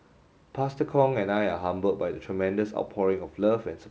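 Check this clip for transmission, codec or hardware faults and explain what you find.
No faults found in this speech clip.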